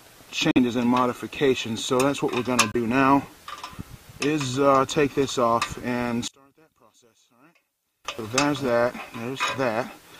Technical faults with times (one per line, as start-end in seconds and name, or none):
0.51-0.58 Bluetooth dropout
2.72-2.75 Bluetooth dropout
6.28-8.05 one channel inverted